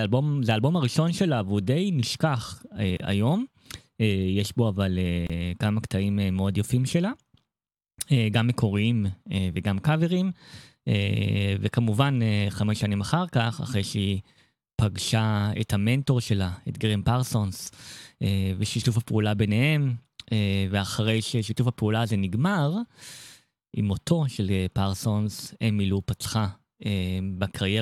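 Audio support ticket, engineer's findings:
Brief dropouts in continuous speech, with smeared edges. Speech resumes where it stopped, with nothing lost. Gap at a join of encoded pieces at 2.97 to 3.00 s, about 27 ms. Same fault at 5.27 to 5.30 s, about 28 ms. Cause: concatenation stage. Segments were encoded separately and joined without trimming, so each segment's encoder start delay and padded final frame survive as silence at the seam. Fix: trim priming and padding, or encode the audio as one stream.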